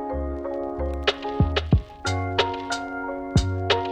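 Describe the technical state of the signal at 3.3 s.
At 3.3 s the signal is intact, with no audible technical fault at that point.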